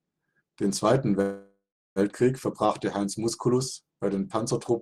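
A speech clip with a call audio freeze from 1.21 to 1.99 s. The last sound is held as a fading buzz, then about 330 ms of silence, after which speech resumes exactly where it stopped, so nothing is lost but everything after arrives roughly 0.75 s late. The likely cause is delayed packets draining the jitter buffer. On a spectrogram, flat horizontal bands fade into a blank strip; the waveform shows a decaying smear, then a flat line.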